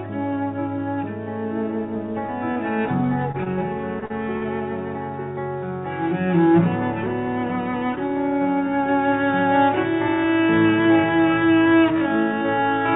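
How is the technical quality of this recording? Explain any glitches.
The recording has two kinds of glitch, brief concealed dropouts early on and a slowed stretch at the end, heard over a call path whose band stops at 4 kHz, consistent with G.711 mu-law at 64 kbps.

Short concealed packet loss occurs at 2.52 s (about 40 ms), 3.32 s, 3.44 s, 4.00 s (each about 20 ms), 4.06 s and 4.38 s (each about 40 ms). The receiver filled each missing slice by extending the preceding sound, heard as a quick smear or wobble.

A time-stretched section runs from 9.96 s to the end, slowed to about 0.56 times its original pace, likely from software fitting the audio to a length. Pitch holds steady while short pieces are repeated, so the slowed audio drags.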